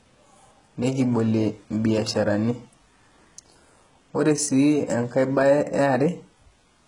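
A speech recording with two faults running through its whole length. The treble sounds synthetic and gritty, with s sounds turning lispy and metallic and nothing above 11.1 kHz. This is likely HE-AAC compression, rebuilding the upper band by copying lower bands upward, and the heavy damage fits a very low bitrate around 12 kbps. Sample clock jitter adds a fine roughness that follows loud, bright passages and disappears in pauses. It points to timing errors of around a microsecond, leaving error products roughly 45 dB below the signal.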